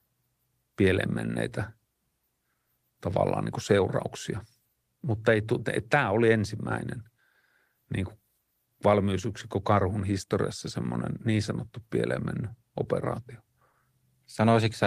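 Right at the end, around 13.71 s, just after "sanottu pieleen mennyt operaatio", there's a short concealed packet loss. About 20 ms of audio didn't arrive in time, so the receiver patched the gap by extending the preceding sound and blending back. You hear a quick smear lasting roughly 40 ms.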